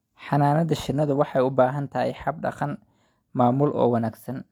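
No technical faults are audible anywhere in the speech; nothing to log.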